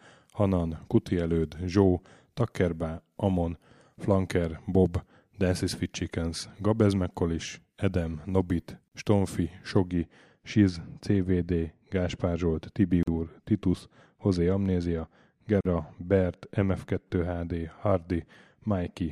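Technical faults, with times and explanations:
8.88 s, 13.03 s and 15.61 s: gaps at joins of encoded pieces. Separately encoded pieces were joined with each encoder's start delay and last-frame padding left in, opening holes of about 38, 43 and 44 ms in continuous speech. Each appears as a brief near-flat dip in the waveform and a thin blank vertical band on the spectrogram, with codec-smeared edges.
9.93 s to the end: de-emphasis applied wrongly. A treble cut meant to reverse pre-emphasis hit audio that never had it, or was applied twice, tilting the response down smoothly to about 11 dB lower at 10 kHz than at 1 kHz. The speech sounds dull and muffled, and the spectrogram's upper bands fade progressively from this point.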